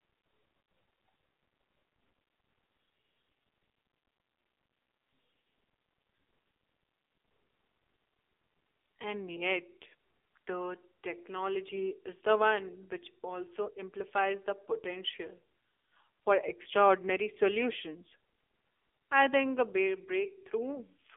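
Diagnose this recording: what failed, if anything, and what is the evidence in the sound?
Codec stage: the AMR narrowband mobile codec, throughout. Audio is confined to 300 Hz to 3.5 kHz and sounds buzzy and synthetic, which fits a low bitrate near 7.4 kbps. A spectrogram would show an empty band above 3.5 kHz.

Network stage: AMR bit errors at 0.88–0.96 s and 11.68–11.91 s turn the sound hoarse and gargly while keeping its pitch and level. Flipped low-priority bits misplace the excitation pulses, so the harmonics smear into noise on a spectrogram while the waveform envelope stays intact.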